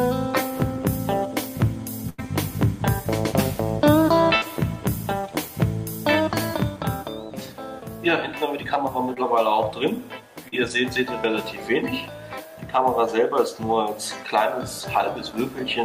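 Burst of packet loss at 2.09 to 2.20 s and again at 4.36 to 4.44 s: about 80 ms and then 60 ms of audio never arrived in time. The receiver stretched the last sound, fading it, so each gap is a held buzz or a fading hiss before the audio jumps ahead.

Short concealed packet loss at 9.14 to 9.18 s and 10.48 to 10.54 s: 20 ms and 40 ms went missing. The decoder extrapolated the preceding sound and blended back, leaving a brief smear or wobble rather than an audible hole.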